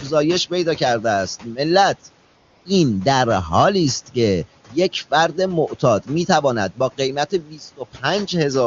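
From 2.25 to 2.65 s there is AMR comfort noise. For those 400 ms the phone judged the talker silent and sent no speech frames, so the receiver filled the gap with synthetic noise built from a rough estimate of level and spectrum. The room noise, about 22 dB below the speech, gives way to a smooth, even hiss that switches in and out. On a spectrogram the background texture turns into a flat, uniform band with sharp edges at both ends.

Between 7.31 and 7.61 s the noise suppressor cuts into the speech, treating parts of it as background. Across roughly a fifth of a second the sound is pulled down by as much as about 10 dB, so the affected speech comes out swallowed and faint. The waveform shows the envelope dipping there.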